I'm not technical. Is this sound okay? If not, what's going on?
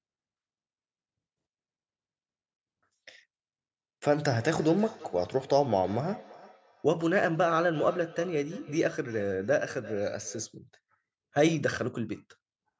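No. From about 4.36 to 10.55 seconds there is a feedback echo between two devices. The speech comes back at a steady interval of roughly a third of a second, sounding thinner and more ringing each time, though well below the level of the original speech. This happens when two devices in the same room are on one call. One device's speaker plays the other's microphone signal, which that microphone then picks up again. Each device's echo canceller only removes its own playback, so the echo gets through.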